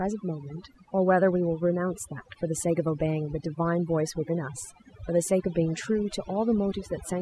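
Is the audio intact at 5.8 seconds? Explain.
No, overdone noise removal runs through the whole clip: bands near the noise floor are gated off, taking quiet parts of the voice with them and leaving twinkling specks that show as isolated dots on a blank spectrogram background.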